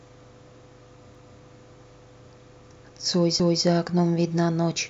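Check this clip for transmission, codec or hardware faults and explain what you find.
The clip has overlapping chunks, twice: at 1.15 to 1.40 s and at 3.40 to 3.65 s. The speech was handled in 2.0 s blocks, and each new block began 250 ms before the previous one ended, so that quarter-second plays twice at the join, heard as a stutter. Unlike a dropout, nothing is missing. Unlike a glitch repeat, it recurs at a fixed 2.25-s spacing, each time the same length.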